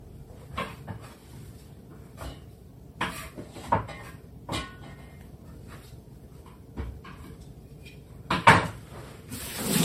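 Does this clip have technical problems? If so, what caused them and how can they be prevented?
Yes: generation loss throughout, swirly, hollow and smeared, with blurred attacks, likely from roughly seven MP3 passes near 60 kbit/s; spectrograms show holes and nothing above 16.5 kHz. Prevent it by keeping masters lossless and encoding only once.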